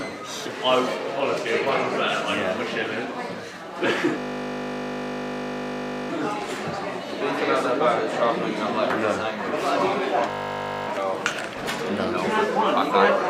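A steady 50 Hz buzz replaces the audio from 4.18 to 6.10 s and again from 10.30 to 10.88 s. This is a system hang loop: one 20 ms slice repeated dozens of times while the hardware kept cycling its ring buffer, which fits a short, frozen playback buffer.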